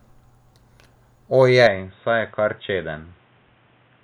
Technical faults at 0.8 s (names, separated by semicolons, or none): none